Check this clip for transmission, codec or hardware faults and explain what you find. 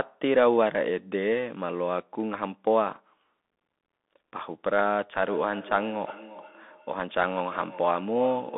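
Two faults are audible: a Bluetooth CVSD headset codec colouring the whole clip, and a feedback echo between two devices in the final seconds.

Throughout, the speech is narrowband, with nothing above 3.8 kHz and the usable band running roughly 200 Hz to 3.6 kHz. The codec damage is plainly audible. The one-bit delta modulator's adaptive step lags fast, loud high content, so sibilants turn scratchy over a granular hiss. That sound points to a 64 kbps CVSD link.

From 5.27 s to the end, speech returns at an interval of around 0.4 s, peaking about 18 dB below the direct speech. A second device in the room replays the call audio into a microphone whose echo canceller cannot remove it, so each repeat comes back thinner and more ringing.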